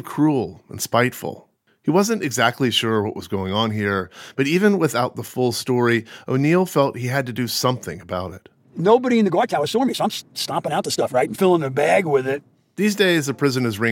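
A time-stretched section runs from 9.19 to 11.43 s: speech rushes 1.6 times faster, yet pitch holds, unlike resampling, likely from short pieces being dropped.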